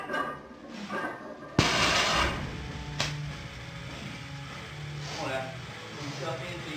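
No technical faults detected.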